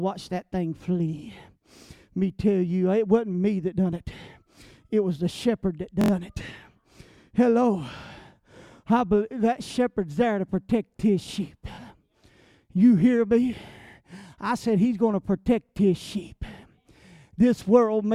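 At 6.01 to 6.11 s, just after "was the shepherd that", a repeated buffer plays one slice of about 23 ms (which fits a 1024-sample buffer) four extra times, giving a rapid stutter with hard joins. At 11.75 to 11.77 s, after "to protect his sheep", it repeats once, a short stutter. Unlike a dropout, there is no gap of silence, and nothing goes missing.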